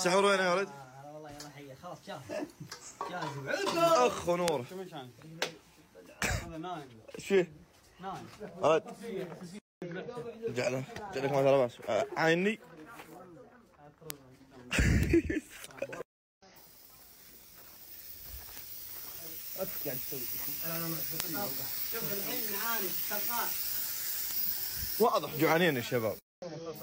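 Bit error spikes land at 4.48, 14.10, 15.03, 18.58, 21.20 and 24.31 s. Each is a flipped bit in one sample or a few adjacent ones. The value jumps and snaps back. Each is heard as a sharp, broadband tick, peaking around -6 to -18 dBFS.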